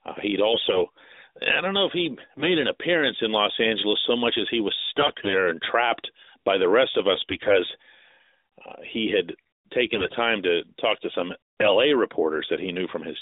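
A speech clip with brief hoarse, gargly roughness at 0.52–0.84, 2.37–2.58, 4.97–5.34, 7.12–7.57, 9.94–10.18 and 11.60–11.73 s: AMR bit errors, where about 5 to 10 percent of the narrowband codec's less protected bits arrived flipped, misplacing excitation pulses.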